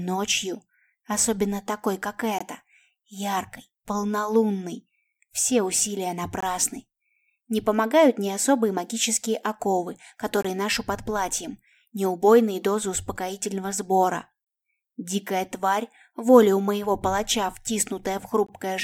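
A gap between chunks recurs at 2.39, 6.40, 10.43, 14.44 and 18.47 s. The audio arrives in 4-second chunks, and each join leaves 20 ms of silence. No sound is lost. Each join is a short, hard-edged hole at a steady 4-second rhythm.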